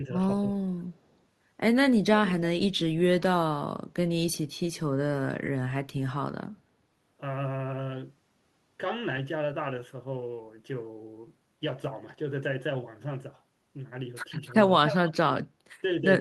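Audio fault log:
0.03–0.13 s and 0.54–0.80 s, speech suppressed in double talk: The speech sinks in level right at the start, a shallow dip of around 5 dB in the first stretch and a deeper one of roughly 15 dB in the second, so the talker seems to fade and come back. This is likely an echo canceller that heard both sides at once, could not tell this talker from the loudspeaker return, and pulled both down together.
14.46–14.54 s and 14.87–15.16 s, echo leak: A second copy of the speech trails the original by 292 ms. In the first brief scrap it sits far below the talker, while in the longer second stretch it rises to about 10 dB under the speech. This likely comes from a speakerphone whose echo canceller missed part of what its microphone caught, sending that remainder back down the line.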